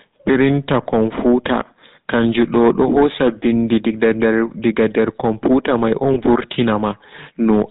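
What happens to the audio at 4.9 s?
At 4.9 s, as throughout the clip, hard clipping is present: peaks driven about 6 dB past the limit are cut flat on a few percent of samples, adding harsh crackling harmonics. The speech also carries GSM full-rate codec damage, with pulse-driven vocal-tract modelling and nothing above 4 kHz, giving a buzzy, gravelly roughness consistent with a 13 kbps stream.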